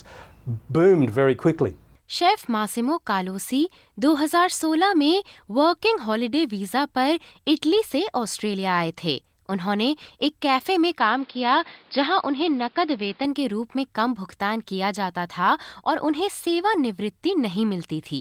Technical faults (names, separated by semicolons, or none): input switched to a poorer device